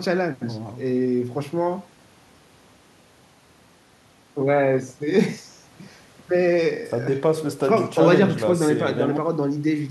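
Listening closely to the speech, nothing stood out as a technical fault at any point.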